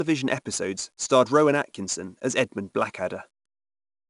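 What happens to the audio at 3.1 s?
At 3.1 s, as throughout, 4-bit ADPCM compression is heard. Coarse 4-bit prediction steps leave gritty hiss on loud speech. Nothing sounds above 10.6 kHz.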